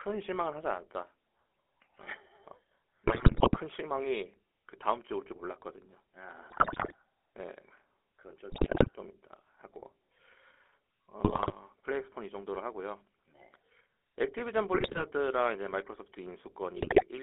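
From the first second the speech has the buzzy, gravelly grain of the GSM full-rate codec, which fits the old 13 kbps coder. It rebuilds the voice from a vocal-tract filter fed by sparse, regularly spaced pulses, so the natural excitation gets replaced by something coarse and rasping. The line band runs only from about 300 Hz to 3.5 kHz, so the sound is thin and boxy on top of that roughness.

Then come the GSM bit errors, in bursts at 3.06–3.57, 6.50–6.95, 8.50–8.89, 11.24–11.55, 14.74–15.05 and 16.76–17.04 s. In each one, corrupted filter, pitch or gain values reach the decoder, so frames come out with a warped spectrum or a sudden jump in level. It breaks up into squawks, pops and a gargling smear, which points to several percent of the bits getting flipped on a weak link.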